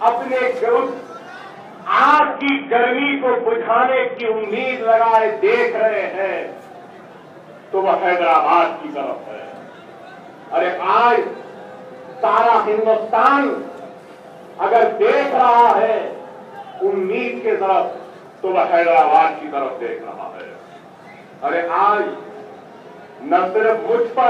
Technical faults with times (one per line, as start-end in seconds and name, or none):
2.19-4.44 Bluetooth SBC bit pool drop